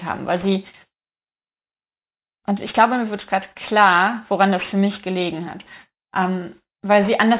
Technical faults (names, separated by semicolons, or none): aliasing